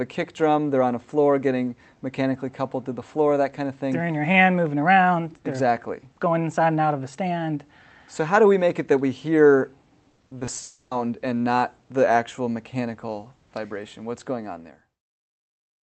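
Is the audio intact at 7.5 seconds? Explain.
Yes, the audio is intact at 7.5 seconds, with no dropout, glitch or other fault at that moment.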